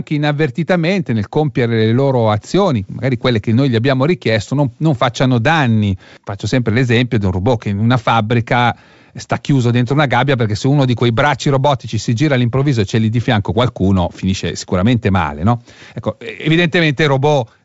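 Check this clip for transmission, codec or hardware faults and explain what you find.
No faults found in this clip.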